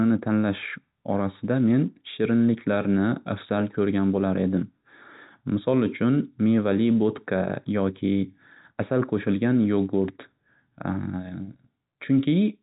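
No technical faults can be heard in this speech clip. It carries the narrow band of G.711 telephone coding, with nothing above about 3.8 kHz and only faint coding grain riding under the voice.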